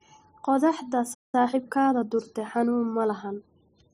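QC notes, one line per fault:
1.14–1.35 s, playback stall: the speech halts mid-flow and the output goes silent for about 0.19 s, then resumes from the point where it stopped. The likely cause is the player running short of data or its thread being blocked.
1.35–2.11 s, time-compressed catch-up: after the stall, the speech runs hurried at about 1.25 times normal speed while keeping its normal pitch, as short pieces are cut out and cross-faded to clear the backlog. A resampling speed-up would raise the pitch instead.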